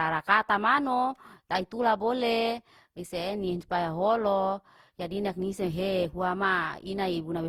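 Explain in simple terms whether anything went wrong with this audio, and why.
Something did go wrong: the whole speech clip sounds swirly, smeared and a bit hollow from start to finish, with the starts of sounds blurred. That's generation loss, likely from the audio being squeezed through the same lossy codec about seven times, each pass adding fresh damage.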